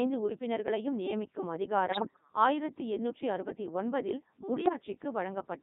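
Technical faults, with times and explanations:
Throughout: Codec 2 vocoder. Speech is rebuilt from sine waves, band-limited to 200 Hz–3.7 kHz. The sound is heavily robotic and buzzy, which fits 3.2 kbit/s.
1.88–2.21 s and 4.66–4.73 s: bit errors on digital voice radio. After "உறுப்பினர்களையும் நியமிக்கும்" and after "ஆயிரத்தி எண்ணூற்றி அறுபத்தி ஒன்பதில்", the voice lurches in pitch and level into warbling gibberish. A few percent of corrupted bits scrambled whole frames.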